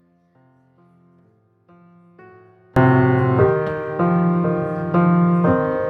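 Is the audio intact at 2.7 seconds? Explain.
No. At 2.7 seconds the sound is nearly gone, a faint remnant sitting about 35 dB below where it should be, and this faint state runs from the very start until 2.76 s. That collapse likely comes from one channel inverted: with one stereo side flipped in polarity, everything the two channels share cancels when they are summed to mono, leaving only the small difference between them audible.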